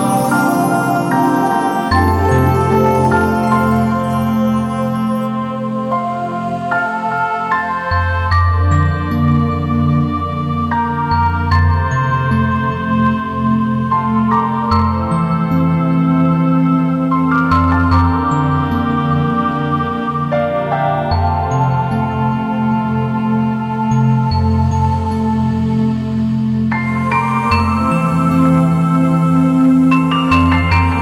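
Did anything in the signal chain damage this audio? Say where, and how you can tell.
Yes: crackle on the loudest peaks throughout points to hard clipping, where the signal was driven about 6 dB past a converter or format limit and a small fraction of peaks were flattened.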